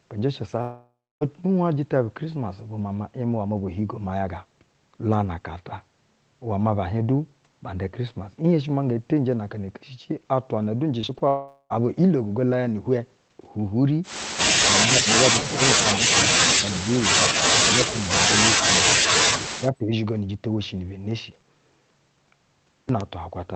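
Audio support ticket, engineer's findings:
Long network dropout: 0.61–1.23 s, speech smears into a fading buzz, then about 0.3 s of silence. 11.28–11.72 s, same pattern, shorter silence. Likely jitter-buffer starvation: about 0.6 s and 0.42 s never arrived; concealment extended the last sound, then gave out.

Repeated packet loss (robotic sound): 11.01–11.22 s, choppy speech just before the second dropout. Four short holes, longest 20 ms, patched by concealment covering a third of the span. Network loss arriving in bursts.

Speech suppressed in double talk: 17.68–17.97 s, speech ducks by roughly 25 dB for about a tenth of a second. 19.59–19.92 s, a shallower dip of about 15 dB lasting about 0.3 s. Likely echo canceller attenuating near-end speech during simultaneous far-end talk. Band limit near 8 kHz consistent with the Opus call path.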